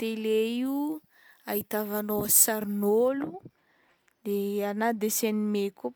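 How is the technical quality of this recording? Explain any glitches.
The recording has one clear fault. From 0.66 to 3.08 s the speech turns thin, bright and hissy, with sibilants pushed forward. That is pre-emphasis left on: the treble boost went in but the matching de-emphasis never came out, leaving about 10 dB extra at 10 kHz, which fits a 50 µs FM curve.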